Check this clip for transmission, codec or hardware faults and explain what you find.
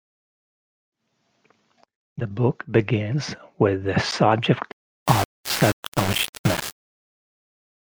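One fault is present. Low bit depth without dither runs from 4.72 s to the end: the speech is likely rounded to about 4 bits with no dither, so the error tracks the signal at roughly 10 dB below it, making quiet passages gritty and sputtering or dropping to silence.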